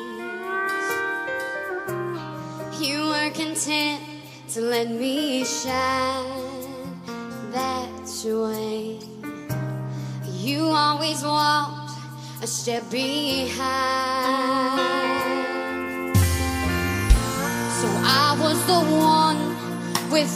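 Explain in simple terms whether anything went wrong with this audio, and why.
Nothing went wrong here.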